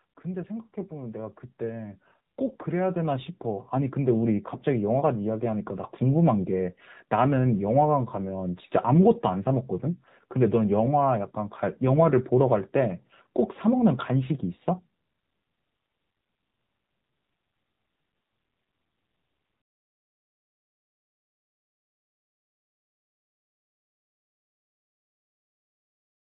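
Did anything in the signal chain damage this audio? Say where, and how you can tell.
Yes. At the codec stage, the AMR narrowband mobile codec runs throughout: the spectrogram cuts off hard at 4 kHz, and the buzzy, synthetic timbre suggests roughly 7.4 kbps.

Network stage, 15.12 to 15.28 s: AMR bit errors turn the speech hoarse and gargly. The waveform envelope holds, but the spectrogram smears, which fits about eight frames with a few percent of bits flipped.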